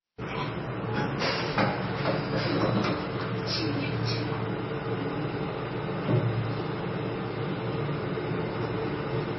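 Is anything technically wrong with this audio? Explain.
Yes. Throughout the clip there is heavy MP3 compression damage, likely from a very low bitrate around 24 kbps: treble stops dead at 5.9 kHz, flickering sparse bands give a watery, swirly texture, and a spectrogram shows a hard ceiling with blotchy holes.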